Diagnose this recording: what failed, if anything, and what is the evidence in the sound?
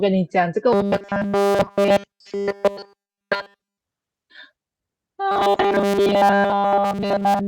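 From 0.73 to 3.80 s, and again from 5.31 s to the end, the speech becomes a rigid, metallic robotic sound from repeated short buffers. It buzzes at a fixed 200 Hz, and nearly all of the audio is replaced. At the driver or buffer stage, data likely arrived too seldom, so a 5 ms slice was repeated. Codec warble drifts, but this pitch stays locked.

From 2.99 to 3.11 s, inside the first robotic span, comes a burst of packet loss at the network stage. About 100 ms of audio is missing. The receiver held the last sound and faded it for about 95 ms, then resumed further on. Unlike the steady buffer buzz, this is a single decaying hold followed by a skip.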